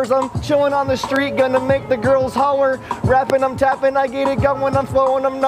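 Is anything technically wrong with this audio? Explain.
Yes. There are two loud pops, at 1.16 to 1.18 s and at 3.30 to 3.32 s. Each is a single short burst lasting about 20 ms, peaking roughly 15 dB above the surrounding sound. The likely cause is a sudden voltage step or pulse, from a plug, a switch, static or a driver glitch, entering the signal path. Each one is heard as a sharp click-like thump laid on top, while the sound continues underneath.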